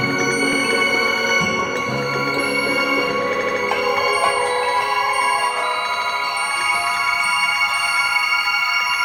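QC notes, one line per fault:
0.53–0.60 s, repeated frames: a 78.4 ms slice of the music plays once more, adding 78.4 ms, a brief stutter that fits a run of three compressed frames being resent. On a waveform the same shape appears twice back to back.
3.35–3.58 s and 5.93–6.17 s, repeated frames: the same 78.4 ms block plays four times in a row, adding 235.1 ms each time. The spectrogram shows identical tiles back to back.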